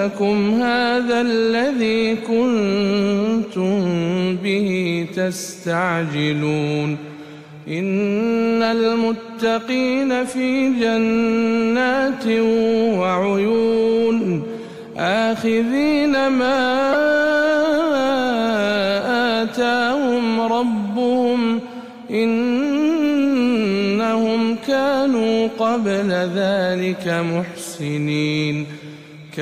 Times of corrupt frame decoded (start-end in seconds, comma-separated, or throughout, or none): 9.42-9.44, 16.92-16.95